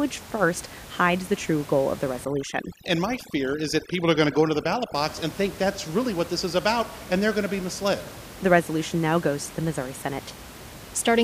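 A short speech recording with a stretch of overdone noise removal from about 2.25 to 4.94 s, right after "true goal of the" and running up to "box and think that's". The room noise, sitting about 17 dB under the speech, drops and breaks up into little twinkling specks. That's a noise reducer set too hard, switching off frequency bands it mistakes for noise and taking the quieter parts of the voice along with them.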